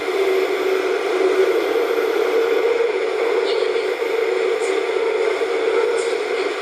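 Nothing goes wrong anywhere in this recording of sounds; there's no technical fault to point to at any moment.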